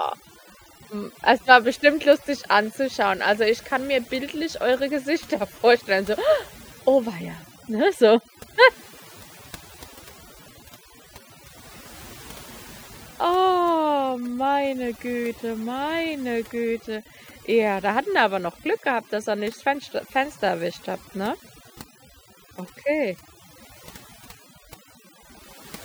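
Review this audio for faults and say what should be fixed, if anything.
Across the whole recording, the pauses between phrases collapse into a lowered floor scattered with twinkling specks. That is overdone noise removal: a noise reduction pass set far too aggressively pulls individual frequency bands down or out entirely whenever they sit close to its noise estimate, so the softer components of the speech are stripped away along with the background noise, leaving chirping residue behind.

To prevent it, use a gentler reduction amount on noisy recordings and confirm by ear that speech detail survives before committing the result.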